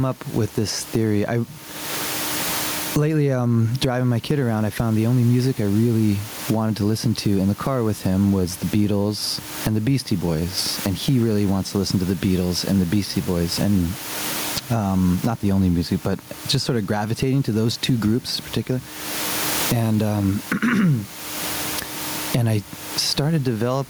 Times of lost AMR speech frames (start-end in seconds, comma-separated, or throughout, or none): none